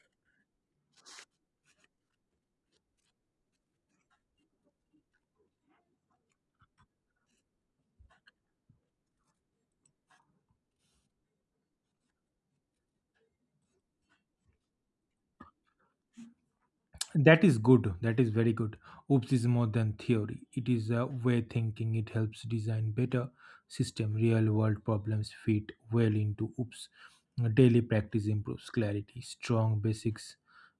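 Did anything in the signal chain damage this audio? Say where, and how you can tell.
No, nothing along the chain has audibly damaged this speech recording, and the signal stays intact and continuous throughout.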